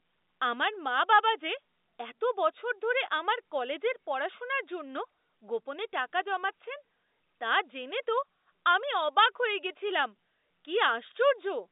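Speech carried on a telephone-band line, roughly 250 Hz to 3.7 kHz as G.711 telephone coding delivers, with nothing technically wrong to report.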